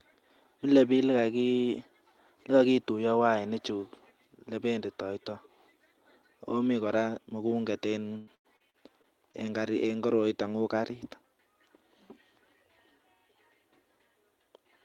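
From 8.17 to 9.47 s, right after "akomi kora mugombet", the speech turns choppy and robotic: this is repeated packet loss. About six holes open in quick succession, the longest 97 ms. Each is papered over by stretching the preceding sound, so about a quarter of the stretch is concealed filler. That gives a smear rather than clean silence. The quick recurrence and synthetic tone distinguish it from a single dropout or a plain gap.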